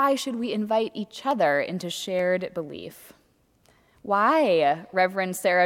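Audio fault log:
0.44, 1.31 and 2.19 s: dropped samples, likely. Each is a single sharp click where the waveform jumps straight from one value to a later one, because roughly a tenth of a millisecond has gone missing. That's far too short to take out any sound, so all you get is the tick, a thin vertical line in the spectrum.
3.63 s: damaged data in a compressed stream. There's a brief blip here, about 12 ms long, where the decoder hit corrupted bytes, misread the frames, lost sync and had to hunt for the next good frame header before picking up again.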